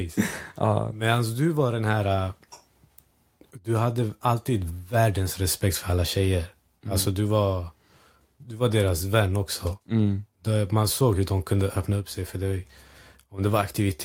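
No technical faults can be heard anywhere in the recording.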